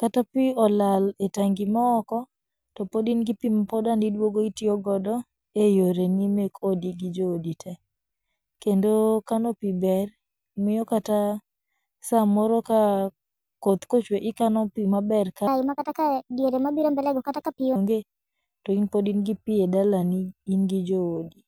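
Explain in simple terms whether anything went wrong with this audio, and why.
From 15.47 to 17.76 seconds, the speech suddenly runs fast. This is a section at the wrong speed. For those two and a bit seconds, the talking plays about 1.33 times quicker than normal. Pitch rises with speed, so the voice jumps up by roughly five semitones and sounds thin and hurried. Then it drops back to normal. The likely cause is that this stretch was played or edited against the wrong clock.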